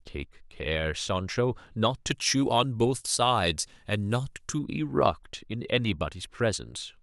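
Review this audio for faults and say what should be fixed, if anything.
From 2.11 to 4.59 s, pre-emphasis left on: treble lifted about 13 dB at 10 kHz with no matching cut, fitting a 75 µs FM curve, so it's thin and sibilant. Make sure the de-emphasis stage is switched on to match whatever pre-emphasis the source applied.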